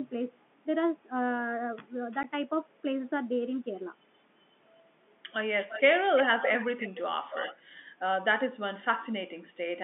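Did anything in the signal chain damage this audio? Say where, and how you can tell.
Yes. In the network stage, one packet was dropped and the receiver filled the gap with silence. At 2.23 s there is a hole about 10 ms long with hard edges, which fits the loss of a single 10 ms packet.

The second fault is an echo leak in call processing. The likely cause is a far-end echo canceller that let loudspeaker pickup back into the return path. A delayed copy of the speech appears from 5.57 to 5.82 s, lagging about 345 ms and roughly 10 dB under the speech. It appears again from 7.31 to 7.61 s, lagging about 275 ms and around 15 dB down. Both sit inside the 200 Hz to 3.5 kHz band of the G.711 line.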